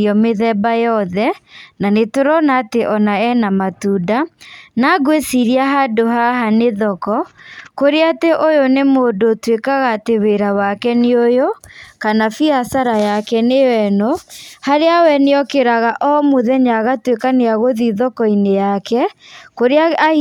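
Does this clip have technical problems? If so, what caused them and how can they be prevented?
No, nothing in this speech recording stood out as a technical problem on listening, so there is nothing here that needs preventing.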